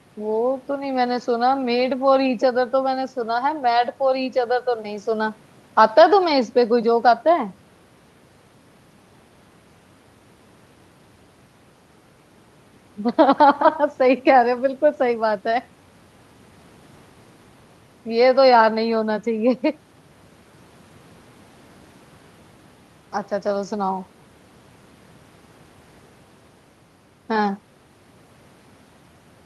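No faults are audible in this speech; it arrives over a call codec path whose top end stops around 12 kHz, as expected for that path.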